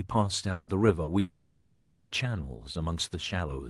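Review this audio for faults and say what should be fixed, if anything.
Between 0.51 and 0.70 s, and again from 1.19 to 2.14 s, the speech gives way to a continuation of the last sound that thins into a fading buzz or hiss before the voice returns. The second gap lasts nearly a second. That is a long network dropout, likely from the link stalling: about 160 ms and then 920 ms of audio never arrived. The receiver's concealment covered each hole, and what was lost is not recovered. Preventing this means a steadier network path, with redundancy or retransmission enabled so brief stalls don't drop audio.

From 1.03 to 1.10 s there is a brief smear in the speech, a short wobble where the sound is stretched rather than spoken cleanly. This is short concealed packet loss: about 40 ms missed the decoder's deadline, and the Opus decoder at 32 kbps bridged it by extending the preceding sound before blending back into the real signal. 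Enabling in-band forward error correction and giving the jitter buffer a little more depth would prevent it.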